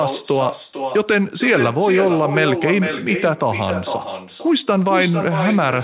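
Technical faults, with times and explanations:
Throughout, echo with no canceller: every phrase returns about half a second later, only about 7 dB quieter and thinner. The far end's loudspeaker is feeding its own microphone, and nothing strips that copy out before it travels back. Both copies stop at 4 kHz, which fits G.711 call audio.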